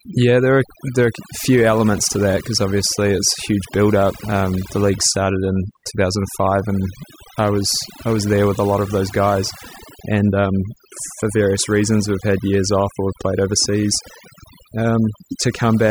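Right through the speech there's overdone noise removal: the noise reducer was pushed so hard it shuts off individual frequency bands near its noise estimate, so the background drops and breaks up into little twinkling specks.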